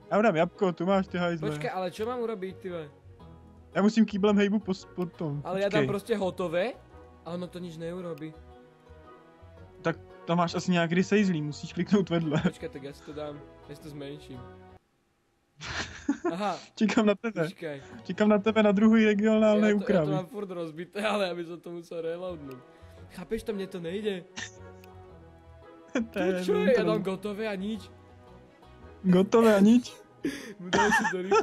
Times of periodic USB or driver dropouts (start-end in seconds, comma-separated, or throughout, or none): none